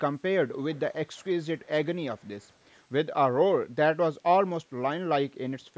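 Faint echo leak occurs at 0.71–0.80, 1.13–1.27, 1.61–1.66 and 2.18–2.49 s. Scraps of speech return 313 ms late, well below the direct sound, likely because an echo canceller missed loudspeaker pickup. A spectrogram shows weak, delayed copies of the harmonic pattern.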